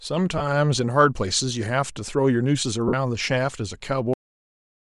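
Throughout the speech there is a breathy, grainy edge, with the upper spectrum thinned and partly replaced by noise. The likely cause is Bluetooth LC3 compression at a rate that fits about 48 kbps with 7.5 ms frames. On a spectrogram, the high band looks patchy and noise-filled rather than harmonic.

Lost LE Audio frames appear at 0.38–0.41 s, a gap of 22.5 ms that fits three missing frames. They recur at 2.88–2.94 s, lasting 52.5 ms, which fits seven frames. In each gap the decoder repeated the last spectrum with scrambled phase, so the sound smears into noise. On the spectrogram, harmonics blur into a noisy block. In the longer gap, the waveform visibly fades in level.

At 4.13 s the audio has a cut-off end. Playback stops mid-sound because the final buffers were never written, and it drops straight to digital silence with no natural decay. The waveform ends abruptly in a flat line, and the spectrogram goes blank from that point on.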